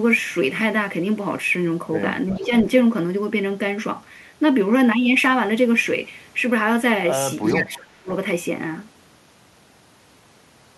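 At 2.30 to 2.46 s a faint echo leak appears: a copy of the speech returns 370 ms late, roughly 20 dB below the direct sound, likely from a loudspeaker-based far end whose echo canceller let part of its microphone pickup through. Unlike room reverberation, it is a distinct repeat at one fixed lag, not a smooth decay. The same echo leak recurs at 7.45 to 7.59 s, with the same 370 ms delay and low level.

Overlapping the first echo, from 2.37 to 2.65 s, speech is suppressed in double talk. The voice dips by only a few decibels over about 150 ms, likely because the canceller, hearing both sides at once, turned down the near talker along with the echo. The second instance, 7.52 to 8.10 s, is far deeper, around 30 dB, and covers about half a second, so the voice nearly vanishes. Unlike a network dropout, it is a gain duck that coincides with the overlapping talk, not an abrupt, glitchy hole.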